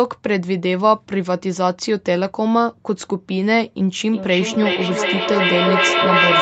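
From 4.07 s to the end, feedback echo between two devices sets in. A second device replays the sound into a microphone, so it returns roughly every 0.4 s, thinner and ringing, climbing to about 3 dB above the speech. Spectrograms show repeating smeared copies, and the waveform swells instead of decaying.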